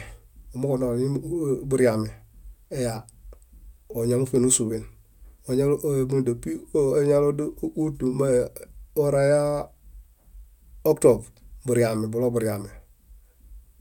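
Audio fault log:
Nothing to log here; the speech runs along without a single glitch, dropout or odd artefact turning up anywhere in it.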